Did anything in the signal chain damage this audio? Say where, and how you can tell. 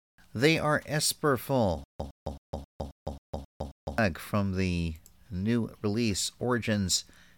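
Yes. From 1.84 to 3.98 s the speech breaks into a stutter with silent gaps: a 112 ms fragment repeats eight times, each followed by about 156 ms of digital silence, a 268 ms cycle. This likely points to a stalled playback or stream buffer replaying its last block, with the missing speech lost.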